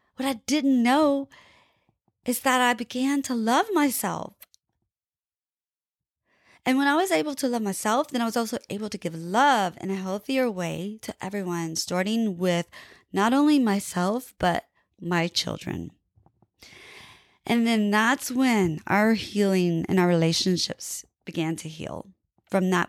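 Speech recording with no audible technical faults.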